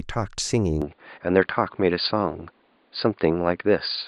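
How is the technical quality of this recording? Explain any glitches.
The recording has one clear fault: from 0.82 s to the end, the input switched to a poorer device. The sound shifts abruptly, with no gap at the change, from wider-band speech to a narrower, boxier tone. The likely cause is the system changing microphones or dropping to a headset's call profile mid-recording. Nothing above 4.8 kHz survives, so sibilants and air are lost. The level also shifts by roughly 5 dB, and a new, faint background noise floor sits about 40 dB below the speech.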